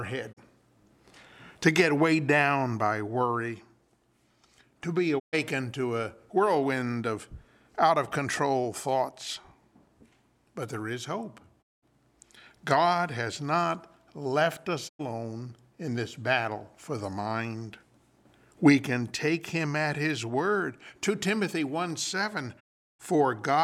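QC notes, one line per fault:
0.32 to 0.39 s, digital broadcast dropout: a quick 20 ms fade to silence, then a gap of about 32 ms, which fits a single lost 32 ms frame before the receiver unmutes.
5.18 to 5.35 s, digital broadcast dropout: same fade-out, with about 128 ms gone, which sounds like four bad frames in a row.
11.61 to 11.84 s, digital broadcast dropout: about 192 ms muted, which fits six frames failing.
14.88 to 15.01 s, digital broadcast dropout: about 96 ms hole, roughly three frames.
22.59 to 23.01 s, digital broadcast dropout: the longest, about 384 ms of silence, which fits twelve frames, and whatever was sent there is simply gone.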